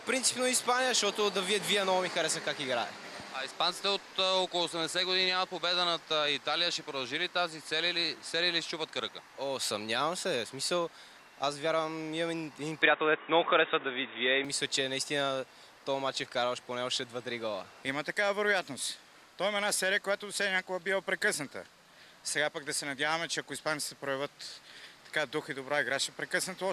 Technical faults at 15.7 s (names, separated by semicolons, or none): none